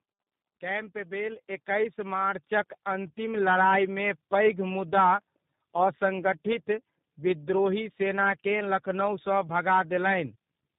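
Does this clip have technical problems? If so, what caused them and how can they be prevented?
Yes. Throughout, the speech sounds rough, muffled and warbly, with nothing above 3.7 kHz: tandem speech coding, where CVSD, iLBC and G.729A were chained, each later coder recoding the previous one's degraded output. Prevent it with transcoder-free operation, keeping one codec end to end.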